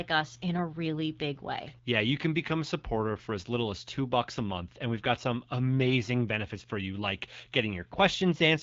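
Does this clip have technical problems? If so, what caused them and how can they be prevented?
No, the speech comes through the AMR wideband (HD Voice) codec with only the light coding character expected at a rate where speech stays clear, and nothing in the signal points to a technical fault.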